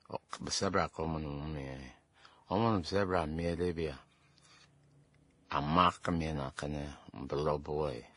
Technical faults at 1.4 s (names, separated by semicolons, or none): transcoding between lossy codecs